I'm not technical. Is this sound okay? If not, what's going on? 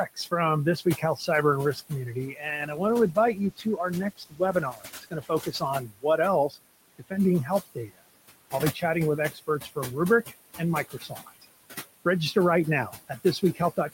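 No. Three problems are audible in this speech clip.

Noise suppressor artifacts run through the whole recording. The background noise of the room sits fairly far below the voice, and a noise-reduction stage keeps pushing it down between phrases and letting it back up whenever someone talks.

Speech cut by the noise suppressor happens from about 0.05 to 11.45 s and again from 12.89 s to the end. In the first stretch, roughly three seconds in total are affected in short pieces. The filter mistakes quiet parts of the speech, such as soft consonants and the tails of words, for background noise and turns them down along with it. Those bits sound swallowed or suddenly faint.

A call bitrate drop runs from 2.43 to 5.77 s. The connection seems to have judged that it had less room to send data, so the audio was squeezed into less than half the usual amount for about 3.3 seconds. With so little data the encoder has to describe the sound coarsely and throw away the higher frequencies. 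The voice turns muffled and rough through that stretch, then clears up once the data rate comes back.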